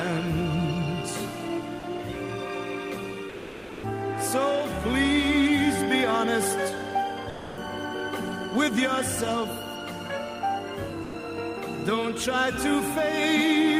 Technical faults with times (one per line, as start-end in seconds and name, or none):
1.79-1.83 sound dropped by the voice detector
3.29-3.83 sound dropped by the voice detector
7.29-7.57 sound dropped by the voice detector
11.03-11.13 sound dropped by the voice detector